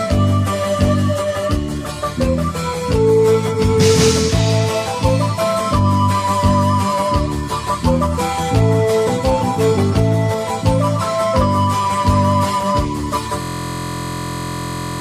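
At 13.42 s a system hang loop sets in: a 23.22 ms piece of audio, fitting a 1024-sample buffer, repeats to the end as a steady 43.1 Hz buzz.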